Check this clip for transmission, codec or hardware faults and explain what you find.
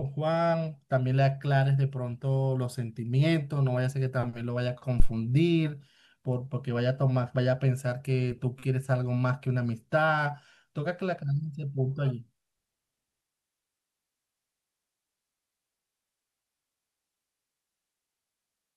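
At 5.0 s the speech carries a phantom power thump: supply switching on the live input steps through the coupling capacitors, giving a deep thump peaking near -9 dBFS and decaying within 24 ms.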